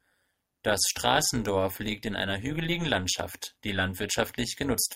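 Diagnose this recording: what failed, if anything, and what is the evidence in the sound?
A frame-based processing stage failed at resynthesis: the speech was split into windowed frames and reassembled with an overlap that doesn't sum to constant gain, producing overlap-add ripple. Gain dips and recovers once per frame across the whole clip, with a depth of about 11 dB at a rate around 200 Hz. That puts a metallic buzz on the speech, with extra tones around each pitch.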